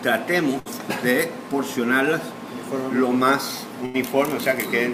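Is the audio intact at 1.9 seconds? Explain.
Yes, at 1.9 seconds the audio plays through cleanly, with no dropout, click, distortion or other break at that point.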